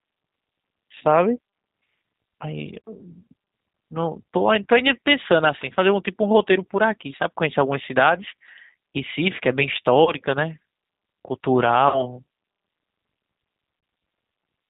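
Across the whole speech recording, the G.729 codec is plainly audible. The signal has been squeezed to 8 kbit/s, which fits the G.729A variant, and rebuilt from a vocal tract filter, a pitch predictor and a handful of pulses per subframe. That leaves nothing above 4 kHz, so the audio sounds narrowband and dull, and the voice has a rough, slightly synthetic grain where the pulse excitation only approximates the original waveform.

VoIP packet loss concealed by the speech codec occurs four times: at 0.98 to 1.03 s, 10.04 to 10.12 s, 11.88 to 12.21 s and 13.80 to 13.83 s. The first, second and fourth each replace about 30 ms of audio, which fits a single lost packet. The third covers 60 ms, which fits two consecutive packets. In each gap the decoder keeps extrapolating from its last pitch and filter settings while lowering the gain, so the sound smears into a brief buzzy or tonal fade. Because each frame depends on the one before, the damage outlasts the missing audio, as at 11.88 s, where the affected stretch of weakened, distorted speech lasts roughly a third of a second.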